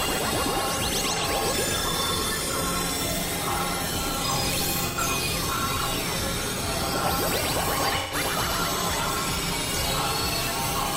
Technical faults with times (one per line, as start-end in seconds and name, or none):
1.15-1.23 AAC frame loss with concealment
4.82-4.98 AAC frame loss with concealment
7.98-8.15 AAC frame loss with concealment